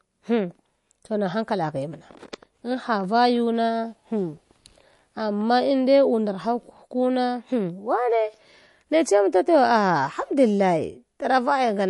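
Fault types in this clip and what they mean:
MP3 compression: The speech sounds dull and plainly coloured by codec damage, with nothing above 11.3 kHz and a watery, swirling texture. This is likely from lossy MP3 encoding short of bits, which fits a low bitrate around 48 kbps.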